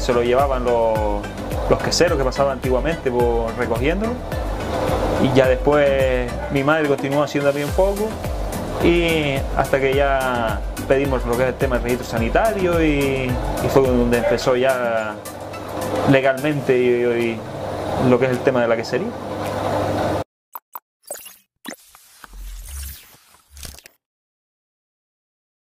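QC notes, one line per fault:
No faults detected.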